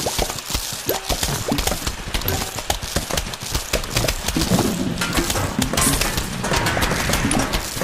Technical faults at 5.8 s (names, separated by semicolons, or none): none